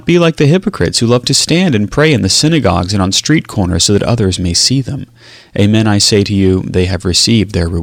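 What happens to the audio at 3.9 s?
At 3.9 s the speech is affected by hard clipping, which runs through the whole clip rather than starting there. The level is driven about 2 dB past what the stage can pass, so the highest peaks are sliced flat, though only a small fraction of samples, under one percent, actually hit the ceiling. The result is brief crackle on the loudest peaks. A waveform shows squared-off tops, and a spectrogram shows vertical streaks of high-frequency harmonics at those moments.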